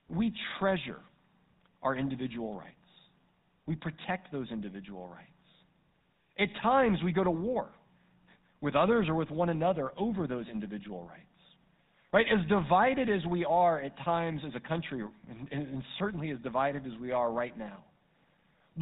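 From start to finish the speech carries GSM full-rate codec damage, and it is plainly audible. The codec models the vocal tract as a filter and drives it with a regularly spaced pulse excitation that keeps only every third sample, so fine detail is replaced by a coarse approximation. The result is a buzzy, gravelly roughness on the voice, with nothing above 4 kHz. The sound fits a 13 kbps GSM full-rate channel.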